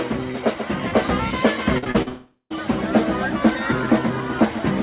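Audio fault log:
1.78–2.08 s, repeated packet loss (robotic sound): the audio turns choppy, with four short holes, the longest about 41 ms, each papered over by repeating the sound just before it. Around 0.12 s of real audio is missing, and about 41% of this stretch is patched rather than genuine. The holes come so close together that the repeated fragments fuse into a mechanical, robotic texture, all within a band that stops at 4 kHz, as the G.711 call path allows.
2.08–2.52 s, long network dropout: straight after the choppy stretch, the sound smears into a fading buzz or hiss as the receiver keeps stretching the last received fragment, then it falls away to about 80 ms of silence before the audio resumes. Roughly 0.42 s of material never plays, and the sound picks up further on with that part simply gone. The cause is likely a break in packet delivery long enough that concealment gave up.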